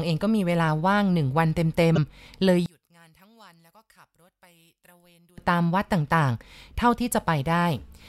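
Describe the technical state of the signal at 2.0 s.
Just before 2.0 s, from 1.95 to 1.98 s, the speech skips forward with a brief corrupted glitch lasting about 30 ms, roughly the length of one 26.1 ms MP3 frame. The likely cause is a broken MP3 bit reservoir. Frames had been cut from the stream, so the frame after the cut reached back for data it had stored in earlier frames and decoded bytes belonging to a different frame instead.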